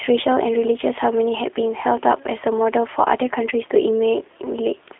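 G.729 codec coding runs throughout this speech clip, its sound pointing to an 8 kbit/s stream. The speech is rebuilt from a vocal tract model, pitch predictor and sparse pulses, leaving it plainly rough and synthetic, confined to a 300 Hz to 3.5 kHz line band with nothing above 3.8 kHz.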